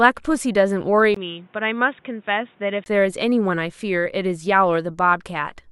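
At 1.14 s a brief gap of about 20 ms opens. Then the speech turns dull and boxy, with nothing above 3.8 kHz. It drops a few decibels and gains faint new background noise. This is likely an input switched to a poorer device. Full tone returns at 2.86 s.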